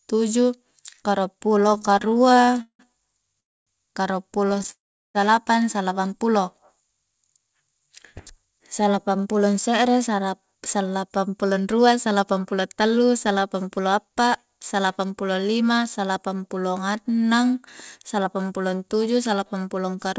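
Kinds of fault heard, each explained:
Repeated stalls (stutter): the receiver ran short of audio again and again and kept stretching the last sound, so the speech drags and judders. This happens in 22 small gaps after "tuju karuang" (1.67–3.37 s, longest 179 ms) and five more near 4.5 s. A spectrogram shows smeared, repeated frames, and the waveform looks chopped.
Call audio freeze: the speech stops dead and then resumes where it left off, inserting a pause without losing anything, at 3.40–3.70 s and 4.71–5.17 s. The likely cause is delayed packets draining the jitter buffer. Each freeze shows as a brief fading tail, then near-silent blank columns and a flat waveform.
Jitter buffer speed-up: from 7.46 to 14.25 s the receiver trimmed tiny pitch-period slices to shed excess buffered delay, about half a second in total. The speech runs about 8% fast and sounds hurried at unchanged pitch. On a spectrogram, harmonics keep their height while syllables compress horizontally, with no visible gaps.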